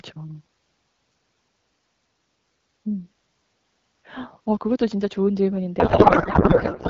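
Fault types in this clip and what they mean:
codec payload misread: the receiver unpacks AMR frames with the fields shifted, which fits octet-aligned packing read as bandwidth-efficient, so from 5.79 s the speech becomes garbled warbling noise.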